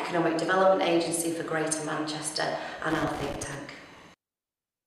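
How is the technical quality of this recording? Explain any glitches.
The recording has one glitch. From 2.9 to 3.55 s, loose connector crackle: a worn contact making and breaking chops the signal, producing an irregular burst of scratchy crackle.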